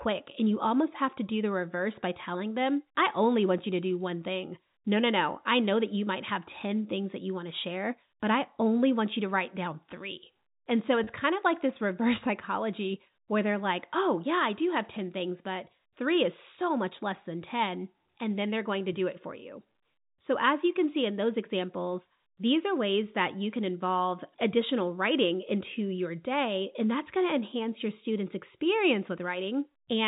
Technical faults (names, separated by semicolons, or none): packet loss with pitch repetition